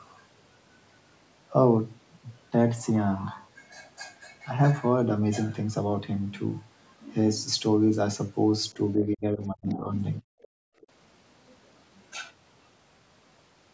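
From 9.02 to 9.92 s the speech dips hard, by up to about 35 dB, for most of that stretch. That's speech suppressed in double talk, likely the echo canceller ducking the talker while both sides spoke. Around 9.69 to 9.74 s, and again at 10.43 to 10.48 s and 10.81 to 10.86 s, a very faint scrap of a second voice slips through. That's likely the other side's voice leaking through from the loudspeaker past the canceller. Between 10.22 and 10.81 s the room sound drops out by about 40 dB: background gated by the echo canceller clamping the mic, then letting go.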